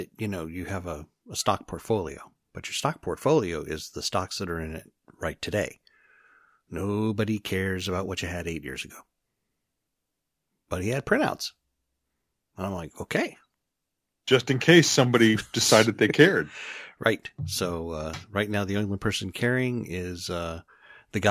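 Nothing in this speech recording stood out as a technical problem on listening.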